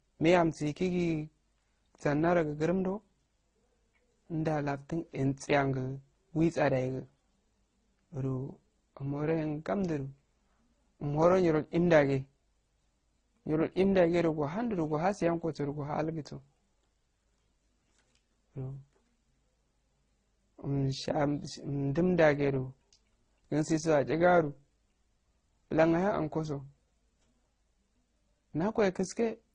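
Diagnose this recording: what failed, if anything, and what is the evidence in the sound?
Codec stage: the speech carries layered, mismatched artefacts throughout and nothing above 9.6 kHz, likely transcoding between lossy codecs, consistent with low-rate MP3 re-encoded to Opus.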